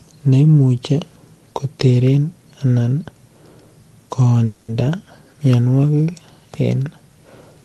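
At 4.45 s the speech stalls for about 0.25 s in a call audio freeze: the last sound is stretched into a fading buzz, likely because packets were delayed and the jitter buffer ran dry. Unlike a dropout, nothing is lost; the speech resumes exactly where it paused, about 230 ms later.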